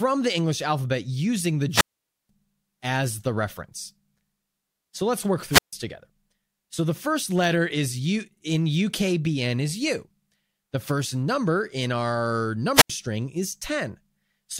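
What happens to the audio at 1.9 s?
At 1.9 s you're right in the middle of a wireless microphone squelch dropout, running from about 1.70 to 2.29 s, just after "alphabet using the". The FM radio link from the mic fades, hiss swells briefly, and then the receiver's squelch shuts the output off for roughly 485 ms, leaving a hole of near silence. The speech comes back with "as the reference".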